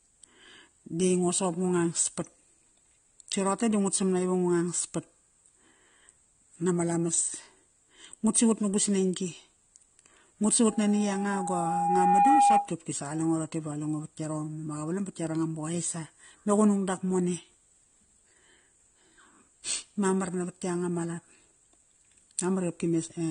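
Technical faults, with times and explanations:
Throughout: AAC compression, likely low-bitrate AAC-LC at around 32 kbps. Nothing is present above 9.7 kHz, so the speech sounds dull, and the coder's coarse quantisation of spectral lines leaves plainly audible smearing and a warbling, fizzy texture on sibilants.
10.67 to 12.75 s: loudspeaker feedback squeal at 812 Hz. The microphone is picking up its own loudspeaker, and at that frequency loop gain exceeds one, so a pure tone swells over about 1.5 s to roughly 10 dB above the speech.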